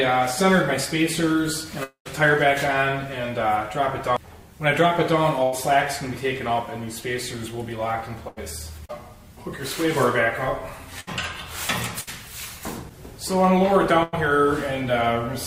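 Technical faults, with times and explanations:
1.83 to 2.07 s, long network dropout: about 0.22 s of audio is lost. The preceding sound is stretched into a fading buzz or hiss, then about 0.11 s of near-silence, and playback resumes past the gap. The likely cause is a stalled network stream with receiver concealment.
5.43, 8.28, 11.00, 12.01 and 14.03 s, burst of packet loss: each gap runs 60 to 100 ms. The receiver extends the last sound while lowering its level, producing a short held buzz or decaying hiss. The audio then continues later, with the intervening portion missing.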